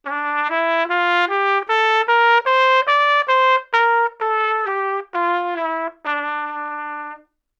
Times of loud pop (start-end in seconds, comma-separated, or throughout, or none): none